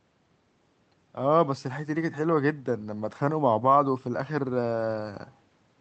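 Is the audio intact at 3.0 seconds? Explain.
Yes, the speech at 3.0 seconds is intact, with no dropout, glitch or distortion there, only the ordinary call-codec band limit that keeps the top end below about 8 kHz.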